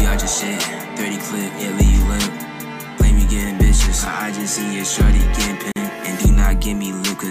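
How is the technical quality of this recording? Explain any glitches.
The recording has one glitch, a gap at a join of encoded pieces, from 5.72 to 5.76 s. The continuous sound drops out for about 43 ms and then resumes where it left off. This happens when separately encoded sections are butted together without trimming the encoder's start-up delay and last-frame padding, so that silence remains at the seam. On a waveform it shows as a flat gap with steep, slightly softened edges. A spectrogram shows a thin, empty vertical band.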